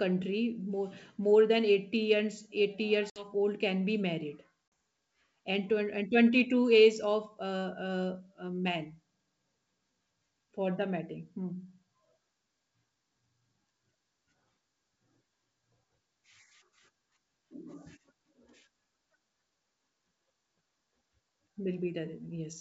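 Packet loss on an ADPCM call occurs at 3.10 to 3.32 s (60 ms missing, a few packets) and 4.68 to 4.72 s (40 ms, a couple). Each loss leaves a hard-edged silent hole in the speech. Afterward, the decoder's predictor and step size no longer match the sender's, so the speech resumes with brief, slight distortion.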